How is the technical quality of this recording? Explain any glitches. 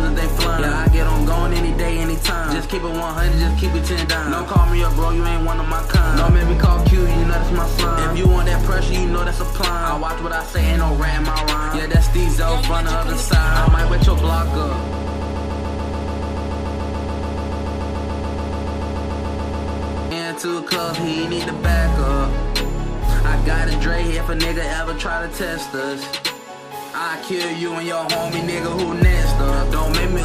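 The recording has one clear glitch: a broken-record loop. From 14.93 s to 20.11 s, a short fragment of about 144 ms repeats back to back, 36 times in a row. It sounds like a rapid, mechanical stutter. The same sliver of sound replays exactly, with no variation. The likely cause is a stall in the player, encoder or stream, which kept resending the last piece it held. The audio that belonged in those five seconds never plays.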